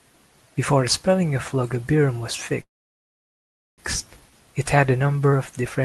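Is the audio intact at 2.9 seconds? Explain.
No. A call audio freeze runs from 2.61 to 3.80 s, likely from delayed packets draining the jitter buffer: a brief fading tail, then about 1.1 s of silence. The sound resumes where it stopped with nothing lost, unlike a dropout.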